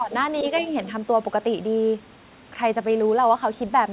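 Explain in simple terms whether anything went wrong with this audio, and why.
Yes, two brief problems. From 0.00 to 0.12 s the speech dips in level, most likely speech suppressed in double talk; unlike a dropout, the sound is turned down rather than lost completely. Between 0.63 and 0.67 s a faint scrap of a second voice, well below the main talker, slips through. This is likely the other side's voice leaking through. It differs from ordinary echo because it is someone else, not the talker repeated.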